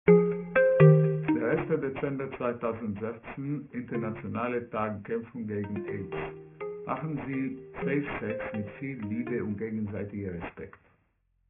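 Bright content sounds gritty and metallic throughout, with the spectrum running hard up to an edge at 3 kHz. This is aliasing: the sample rate was cut, fitting a drop to 6 kHz, without filtering first, so energy above 3 kHz folds back as false tones roughly 15 dB down.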